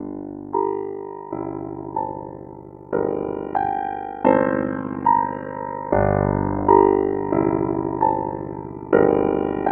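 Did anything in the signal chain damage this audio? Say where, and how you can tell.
Yes, overlap-add ripple from a frame-based processing stage runs through the whole music clip as a rough flutter at around 50 Hz, dipping by about 60 dB each frame. Its steady, frame-locked rate distinguishes it from packet loss, whose dropouts fall irregularly.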